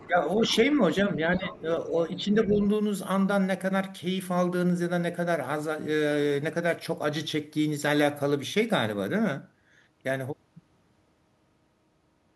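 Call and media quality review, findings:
Other side's voice leaking through: faint second voice under the talker at 0.0–0.07 s, 0.39–0.56 s, 2.17–2.25 s and 2.47–2.67 s, roughly 15 to 25 dB down. Likely residual loudspeaker echo missed by the echo canceller. An added voice, not a level change in the talker.

Speech suppressed in double talk: talker's own voice dips by up to around 10 dB at 0.06–0.82 s, 1.16–1.7 s and 1.87–2.59 s, overlapping the leak bursts. Likely echo canceller attenuating everything during simultaneous talk. Nothing added, the talker's level drops.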